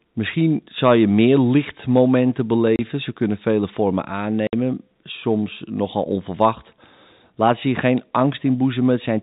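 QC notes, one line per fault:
2.76 s, packet loss filled with silence: after "zal je meer lichtmomenten" the speech drops out for 30 ms, one lost packet replaced by digital silence, with hard edges.
4.47–4.53 s, packet loss filled with silence: a 60 ms hole after "kunnen vele vormen", before "soms nogal onverwacht", two consecutive packets' worth of silence, with hard edges.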